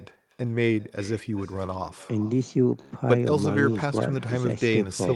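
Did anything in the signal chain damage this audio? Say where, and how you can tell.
Yes. Throughout the speech there is an echo with no canceller, a fault at the call-processing stage. Every phrase returns as a distinct, thinner copy around 400 ms later, about 21 dB below the direct speech. The far end's loudspeaker output is reaching its microphone and being sent back across the network with nothing subtracting it. Room reverberation would smear the tail continuously; this is one discrete, delayed repeat, set by the network round trip rather than room size.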